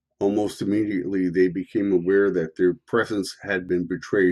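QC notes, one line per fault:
3.69 s, overlap between stream segments. Two segments' timestamps overlap, so about 14 ms of speech is cut. The waveform jumps, heard as a tiny skip.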